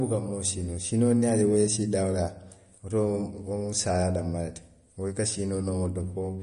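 From start to finish the speech has a watery, swirling texture, with metallic chirps on s sounds, smeared consonant attacks, and nothing at all above 10.6 kHz. This is likely MP3 compression at a starved bitrate, which fits roughly 40 kbps. Short of bits, the encoder cut the treble at a fixed point and dropped quieter frequency lines, which flicker on and off between frames and make the sound swirl.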